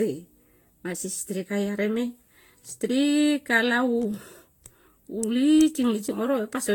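From start to finish the speech sounds swirly, hollow and smeared, with blurred consonant attacks and nothing above 19.4 kHz. This is generation loss, likely from re-encoding around ten times with Vorbis near 70 kbit/s, each pass adding fresh quantisation damage.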